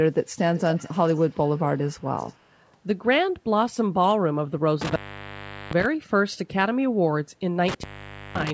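From 0.54 to 2.72 s a faint, delayed copy of the speech trails the original by about 275 ms, well below the direct sound. This is likely an echo leak, where the far end's loudspeaker output reached its microphone and slipped past the echo canceller. At 4.81 to 5.86 s, and again at 7.68 to 8.51 s, the sound drops out with crackle at each edge, leaving a faint hiss for roughly 756 ms and then 519 ms. This is an intermittent contact, a loose cable or plug briefly opening the line.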